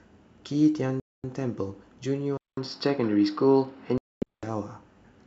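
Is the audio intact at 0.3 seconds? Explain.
Yes, the speech at 0.3 seconds is intact, carried cleanly by the G.722 wideband telephone coding at 64 kbit/s with no fault at that moment.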